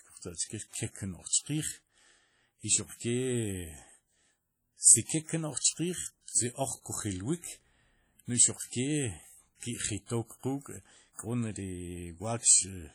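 Speech, carrying heavy transform-codec damage from start to finish: the audio sounds washy and ringing, with a hiss that swells and fades along with the voice. The likely cause is WMA compression at a low bitrate, with the damage fitting something around 32 kbps. On a spectrogram, weaker components show up as ragged, blocky gaps where they have been quantised away, and no content appears above 19.9 kHz. Around 1.28 to 1.32 s there is audible pre-echo. A short hiss runs ahead of a sharp attack for about 37 ms and softens its onset, because the encoder spread noise sized for the loud onset across the quiet stretch before it. In the waveform this appears as a low, fuzzy smear just ahead of the transient. On the spectrogram it is a broadband haze in front of the attack's vertical edge.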